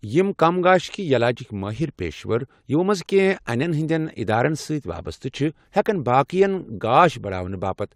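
Nothing technically wrong turns up anywhere in this short bit of speech, so there's no fault to point to.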